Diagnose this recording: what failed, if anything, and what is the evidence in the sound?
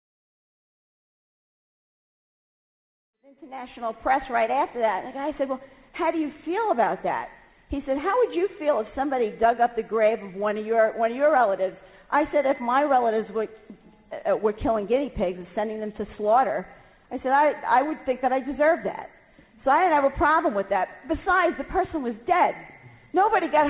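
Nothing failed in this recording.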